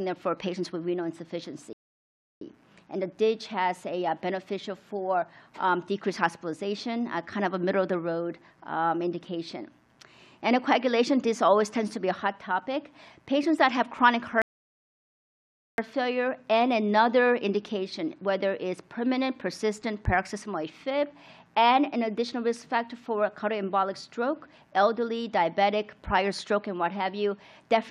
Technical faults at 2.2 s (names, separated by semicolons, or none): rebuffering stall